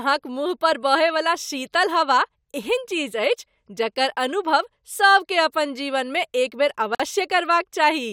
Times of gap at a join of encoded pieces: 6.95-7.00

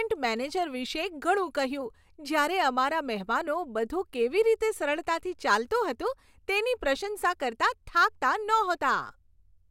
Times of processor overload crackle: none

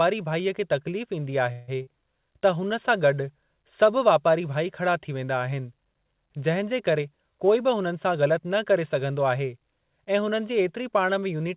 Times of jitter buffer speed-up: 6.98-8.40

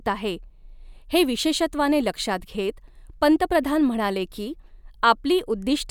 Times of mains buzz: none

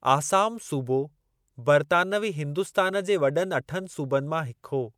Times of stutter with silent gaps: none

